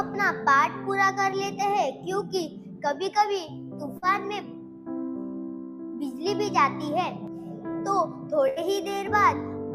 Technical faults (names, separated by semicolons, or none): burst of packet loss